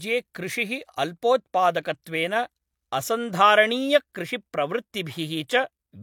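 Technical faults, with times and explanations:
Throughout, low-bitrate audio saved at a high bitrate: the speech carries the artefacts of an earlier encoding and has nothing above 18.5 kHz, despite sitting in a high-rate MP3. The likely cause is an earlier low-bitrate encode, consistent with HE-AAC near 40 kbit/s, whose losses re-encoding cannot restore.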